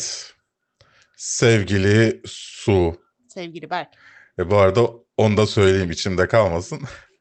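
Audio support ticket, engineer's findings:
Nothing stood out on listening to this speech clip, which came over a call path that sounds band-limited to around 8 kHz, consistent with a 32 kbps Opus link.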